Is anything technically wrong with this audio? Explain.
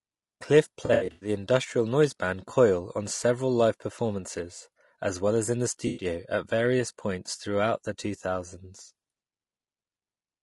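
Yes, two problems. Throughout, the speech sounds rough and grainy, with noise filling the gaps between harmonics and a thin, synthetic top end. That points to low-delay AAC compression, likely AAC-ELD at a low rate in the region of 32 kbps. Its short frames resolve pitch harmonics only coarsely, and at that rate there aren't enough bits to code them cleanly.

There's also AAC frame loss with concealment, from 0.85 to 1.29 s and again from 5.87 to 6.05 s. In the first stretch about 240 ms went missing in bursts spread over 360 ms, the longest run around a tenth of a second. The second loses about 100 ms. The decoder patches each gap from the last good spectrum, so you hear smeared, noisy, phasey blurs instead of the real speech.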